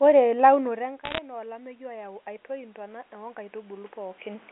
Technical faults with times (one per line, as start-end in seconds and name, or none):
0.59-4.47 automatic gain rising
1.04-1.18 bit errors on a digital phone line